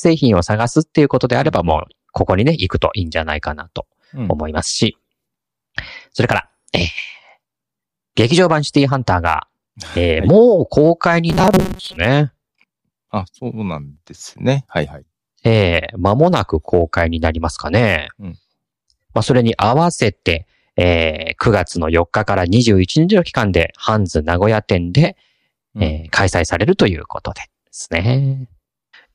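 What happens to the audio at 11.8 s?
At 11.8 s the clip is inside a stretch of robotic sound from repeated short buffers, lasting from 11.30 to 11.97 s. New audio was likely arriving too seldom, so playback filled the gaps by looping the most recent chunk while the real signal was skipped, with roughly half the material repeated. The loop rate of 188 Hz points to chunks about 5.3 ms long, and that fixed rate imposes a rigid, metallic buzz on the speech.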